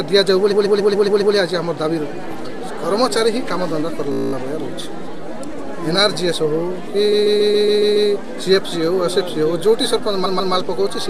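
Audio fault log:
0.51–1.34 s, 4.12–4.33 s, 7.11–8.09 s, 10.25–10.53 s: repeated frames. A block of compressed audio replays back to back, heard as a stutter. Most blocks last 139.3 ms, replayed up to seven times. At 4.12 s a 17.4 ms block loops twelve times. Unlike a dropout, nothing goes missing: identical sound returns, adding between about 0.2 and 1 s each time.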